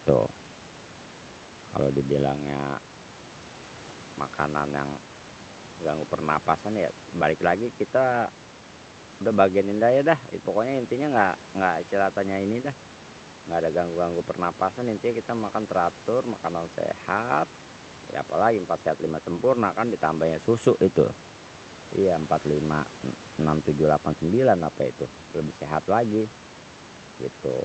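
Nothing goes wrong here; the room's background noise sits about 21 dB below the speech, and the call codec's top end stops around 8 kHz, which is just how the line carries it.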